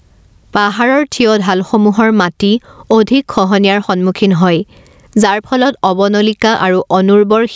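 Speech with gain pumping throughout: the gain swings by around 15 dB as loud sounds pull it down, likely from gain set far too high ahead of a fast limiter. The call microphone processing also band-limits it to 8 kHz.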